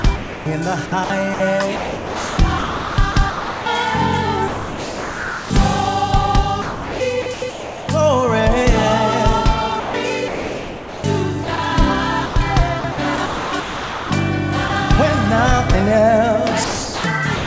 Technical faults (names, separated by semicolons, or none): sound chopped by the voice detector; sound dropped by the voice detector